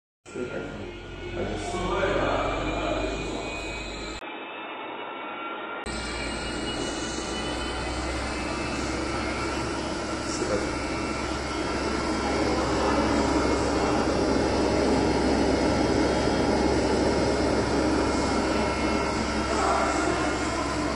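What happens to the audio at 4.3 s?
At 4.19 s the sound abruptly turns dull and boxy, with nothing left above 3.8 kHz, after a brief gap of about 20 ms. It stays that way until 5.86 s. The likely cause is an input switched to a poorer device, such as a headset's call profile, whose narrower band and different tone replace the original microphone. A simple filter or codec bandwidth drop wouldn't add the momentary silence or bring in a new background noise sitting roughly 35 dB under the signal, while the overall level stays about the same.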